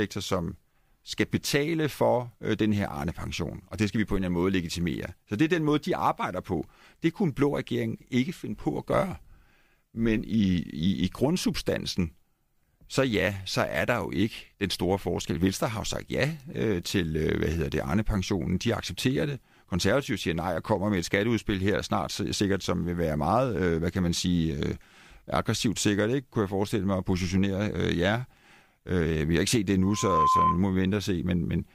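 A microphone in this speech recording is picking up the loudspeaker it feeds, and at 1 kHz the loop gain rises above one, producing loudspeaker feedback squeal. Right after "har ikke set det", from 29.82 to 30.62 s, a pure 1 kHz tone swells up over just under half a second to sit about 5 dB above the speech, then holds as a squeal until it stops.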